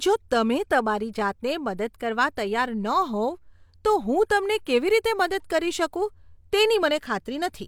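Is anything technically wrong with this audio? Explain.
No, nothing technically wrong can be heard in this speech clip. No faults turn up anywhere in the recording.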